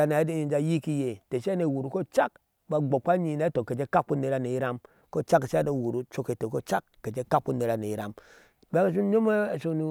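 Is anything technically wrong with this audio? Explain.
No, nothing is technically wrong with this audio.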